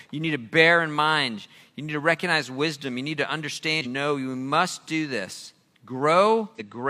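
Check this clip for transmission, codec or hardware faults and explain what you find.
Two short bursts of damaged data in a compressed stream break up this speech clip, at 3.81 to 3.87 s, just after "need to", and at 6.55 to 6.61 s. Corrupted bytes leave the decoder misreading frames until it resynchronises on the next valid header, so each spot is a brief glitch of about 60 ms. On a spectrogram each shows as a sharp-edged break in the surrounding harmonics, and in the waveform as an abrupt irregular segment.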